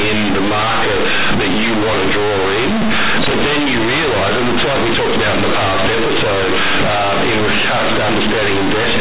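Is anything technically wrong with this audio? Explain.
Yes. Throughout the speech, the audio shows companded audio read as linear: mu-law telephone bytes are played as plain 8-bit samples with no expansion, so every sign change throws the waveform across half its range. Quiet passages become as loud as peaks, giving harsh, buzzy distortion and heavy noise in pauses. Unlike ordinary clipping, the noise doesn't subside when the signal is quiet. The narrow telephone band, which cuts off at 4 kHz, still comes through.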